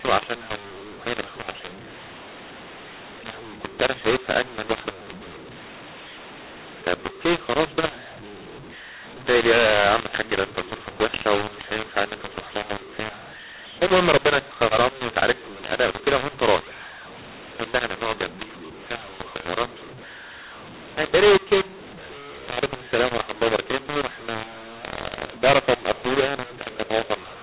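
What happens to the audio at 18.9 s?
At 18.9 s the speech carries the mu-law and A-law mix-up that runs through the whole clip: samples coded with the A-law curve are being expanded with the mu-law curve, so each level maps to the wrong amplitude. The speech sounds harsh and gritty, and pauses fill with hiss. On a waveform the envelope looks lumpy and the silent stretches never sit at zero. A spectrogram shows broadband noise smeared up to the 4 kHz telephone ceiling.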